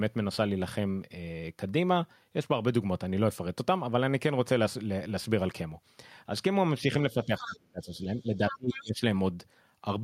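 A speech clip in which, from 7.12 to 9.01 s, the talker's voice repeatedly ducks and fades, by as much as about 25 dB, for around a second and a half in total. This is speech suppressed in double talk, likely caused by an echo canceller unable to separate the talker from the far end. Unlike a dropout or packet loss, it tracks the moments the other party talks. In two of those moments, 7.42 to 7.56 s and 8.18 to 8.82 s, the other side's voice leaks through, about 15 dB below the talker. This is likely residual loudspeaker echo the canceller missed. It differs from crosstalk or background chatter because it is a distinct second voice that appears only within the suppressed span.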